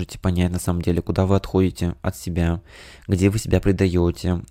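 No technical faults can be heard anywhere in this speech recording. There is nothing in the signal that calls for a time mark.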